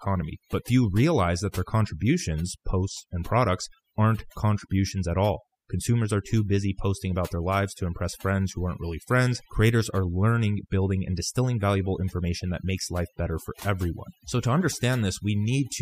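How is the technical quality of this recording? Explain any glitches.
The quality is compromised by overdone noise removal throughout. Bands near the estimated noise floor are cut hard, stripping quiet speech detail and leaving near-silent, twinkling gaps. On a spectrogram this shows as scattered isolated specks.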